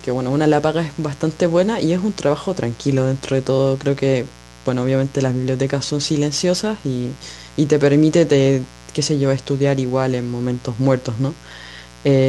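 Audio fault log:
Throughout: mains buzz, a steady raspy hum sitting about 25 dB under the speech. It's built on 60 Hz, with sharp spikes landing twice per mains cycle, so the harmonics stack up into the kilohertz range and give it that gritty edge rather than a smooth tone.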